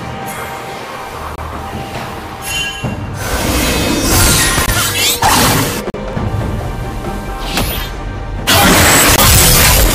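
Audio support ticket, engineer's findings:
Block of digital silence at 1.36–1.38 s (about 25 ms), 4.66–4.68 s (20 ms), 5.90–5.94 s (40 ms) and 9.16–9.18 s (20 ms). Audio drops to silence and returns with no fade, leaving a short hole. Probable component: output or render stage not filling its buffer in time. Unlike stream damage, this is a gap, not a new noise.

Damaged data in a compressed stream at 1.51, 3.88, 6.13 and 8.73 s. Each is a brief glitch. Probable component: the compressed file or its transport. Corrupt bytes make the decoder misread frames, lose sync and hunt for the next frame header. Distinguished from the silence blocks by its origin in the coded data rather than the output buffer.

Hard clipping from 3.34 to 5.64 s, overdriven by about 11 dB, and from 8.48 s to the end, overdriven by about 19 dB. Peaks are flattened, so the audio has a harsh fuzz on every loud moment that is worse in the second stretch. 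Probable component: a gain stage or converter run past full scale. The flat tops add high harmonics. Unlike the isolated clicks and chirps, this distortion lasts through the whole loud passage.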